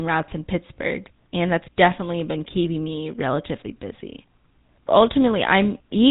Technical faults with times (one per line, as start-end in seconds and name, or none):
0.00-6.10 GSM full-rate codec